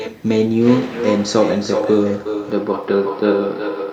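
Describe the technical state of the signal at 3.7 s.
At 3.7 s the speech carries echo with no canceller: a distinct repeat arrives roughly four tenths of a second later, about 8 dB down. It is a separate copy returning from the far end's loudspeaker, not a smeared room reverb tail.

The moment also falls inside a band-limited stretch from 2.50 s to the end, where the top of the band is cut back. The likely cause is an input switched to a poorer device. The dulling begins abruptly at 2.50 s with no gap and no level jump, and the new noise floor sits far below the speech, so it is not a constant codec low-pass.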